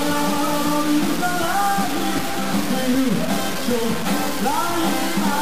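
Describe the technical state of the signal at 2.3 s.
Low bit depth without dither is present at 2.3 s, as it is across the whole clip. The signal sounds coarsely stepped, which fits roughly a 3-bit resolution, likely from truncation with no dither added. Because the rounding error tracks the waveform, it comes out as grainy, gritty distortion that shifts with the sound. The error sits only about 10 dB below the signal, and the quietest parts sputter between steps or fall silent.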